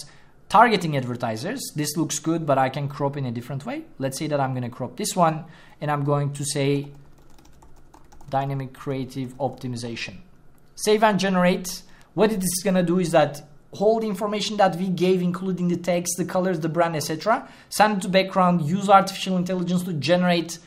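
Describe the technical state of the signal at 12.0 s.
A bit error spike occurs at 12.02 s, three consecutive samples knocked off their true values by flipped bits, peaking around -28 dBFS. It registers as one sharp broadband tick, a thin vertical line across the whole spectrogram and a needle-like jump in the waveform that snaps back immediately.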